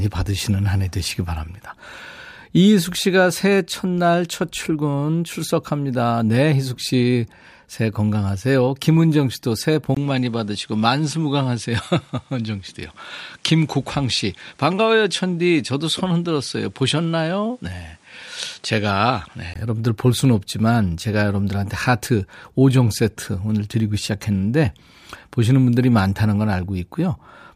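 From 9.95 to 19.56 s the speech turns dull, likely an input switched to a poorer device: a 20 ms silence at the switch, unchanged waveform level, and nothing above 11.3 kHz on a spectrogram.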